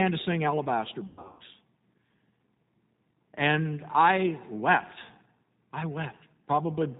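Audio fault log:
throughout, G.729 codec: speech sounds plainly rough and synthetic with nothing above 4 kHz, because the 8 kbit/s codec rebuilds it from a vocal tract filter, pitch predictor and sparse pulses.
1.07 to 1.40 s, VoIP packet loss concealed by the speech codec: speech smears into a buzzy, fading tone or coloured noise as the decoder extrapolates across 280 ms of gaps spread over 320 ms, the longest 120 ms.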